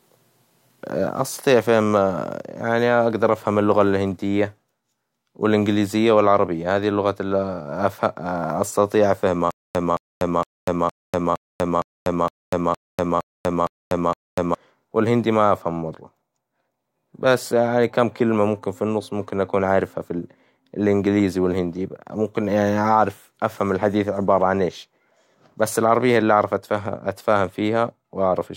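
A stalled player or stream is the likely cause of the stutter with silent gaps from 9.51 to 14.55 s. A 219 ms fragment of speech replays eleven times, each followed by 243 ms of digital silence, pulsing every 463 ms, before "والهندي ما أفهمه مرة" resumes.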